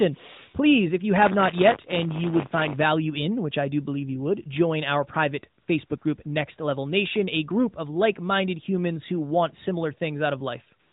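From 1.18 to 2.84 s, between "if you" and "in which I do", the speech carries a steady robotic rattle at about 100 Hz that stays for as long as the voice runs through it. This is buffer tearing: the writing program and the playback hardware have drifted so their positions cross inside each period. A small slice of every buffer, roughly a twentieth, holds audio from about 30 ms earlier, with hard joins on either side. The 100 Hz repetition points to buffers of about 10 ms.

Just after "would join our private", the real background drops out and smooth, even noise switches in briefly at 5.62 to 5.68 s, 5.86 to 5.90 s and 5.98 to 6.02 s, lasting 60 ms, then 40 ms and 40 ms. The same flat hiss returns from 10.80 s to the end. This is AMR comfort noise. The phone judged the talker silent and stopped sending speech frames, so the receiver filled each gap with synthetic noise built from a rough level and spectrum estimate. 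The whole clip is also band-limited to 4 kHz by the narrowband mobile codec.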